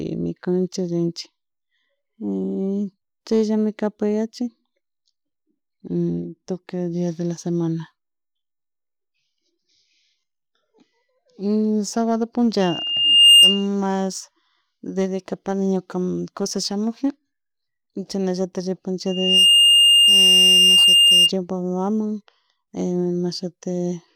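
Loudspeaker feedback squeal at 12.61–13.67 s and 19.06–21.32 s: a single 2.8 kHz tone swells over a fraction of a second, unlike a steady hum or whistle.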